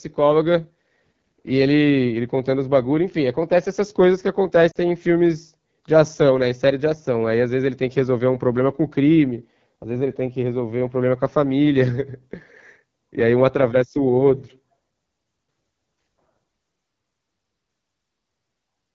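Throughout the speech, the AMR wideband (HD Voice) codec leaves a plainly audible rough, raspy edge. The coder models the voice as pulses through a vocal tract filter up to 6.4 kHz and fills 6.4 to 7 kHz with shaped noise. The coarseness points to one of its lowest rates, around 8.85 kbit/s. Unlike a narrowband phone codec, which cuts off near 3.4 kHz, the top end here extends to about 7 kHz but sounds hissy and synthetic rather than clear.

From 4.71 to 4.77 s, a 40 ms stretch drops out as lost AMR speech frames, which fits two consecutive 20 ms frames failing their checks. The decoder fills the gap by reusing the last good pitch and vocal tract settings at falling gain, so the sound briefly warbles and sags before the voice resumes, slightly rough for an instant. That smeared, fading fill distinguishes it from a plain dropout, which would leave abrupt silence or a click.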